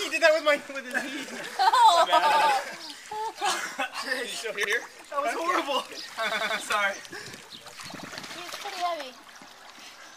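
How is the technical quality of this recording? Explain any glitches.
The recording has a recurring repeated buffer fault, heard four times as stutters at 2.32–2.51 s, 4.64–4.74 s, 6.32–6.60 s and 7.99–8.08 s. Each time, fresh audio reached the playback device late, so it replayed its last block of about 93 ms (which fits a 4096-sample buffer) two, one, three and one extra times respectively. The same slice repeats with a hard seam at every join, and no audio appears to be skipped afterward.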